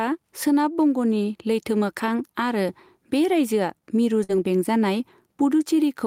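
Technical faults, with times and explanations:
Throughout, gain pumping: the background swells between phrases and ducks by around 5 dB under each loud syllable, likely from gain set too high feeding a fast limiter.
4.23 to 4.31 s, burst of packet loss: the receiver stretches the last sound into a fading 53 ms fill, then the speech picks up again with 60 ms missing.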